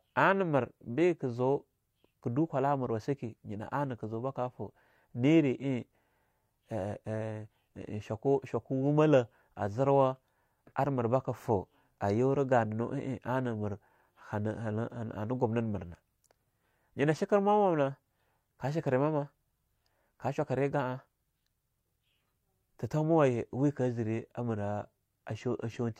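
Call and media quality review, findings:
No faults found in recording.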